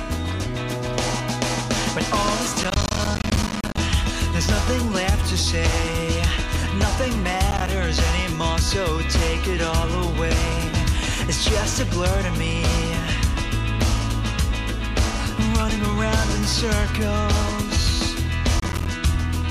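Processor overload crackle appears from 2.64 to 3.78 s, briefly at 7.51 to 7.68 s, and again at 18.60 to 18.89 s. Buffers of around 10 ms repeatedly miss their deadline and drop to silence, so dozens of hard-edged gaps in the first burst, and fewer later, produce gritty tearing.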